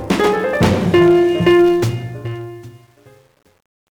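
From 1.6 s to the end at 4.0 s, the fade-out shows truncation distortion on a fade. The fade itself starts from about 1.6 s. But the volume stage keeps too few bits and adds no dither, which fits a stage keeping about 9 bits. As the level drops, the waveform collapses into coarse square steps. From 2.32 s onward the tail turns gritty.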